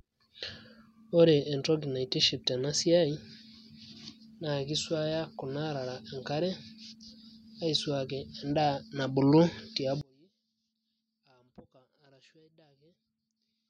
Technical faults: one channel inverted

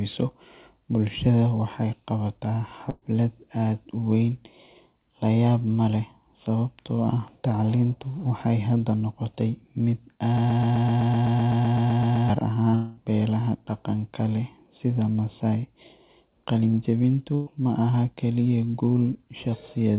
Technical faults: burst of packet loss; broken-record loop; short concealed packet loss; long network dropout

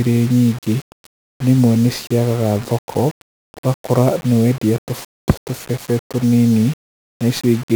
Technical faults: 1-bit DFPWM compression

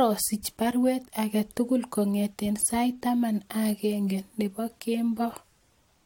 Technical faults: none

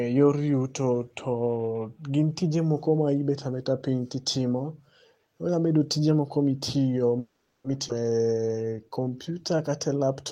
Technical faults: call audio freeze; skip ahead; jitter buffer slow-down

